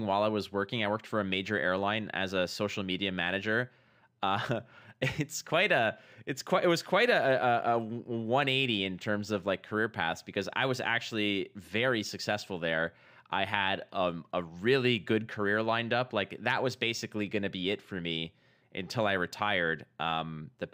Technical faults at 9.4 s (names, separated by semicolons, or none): imaging from linear upsampling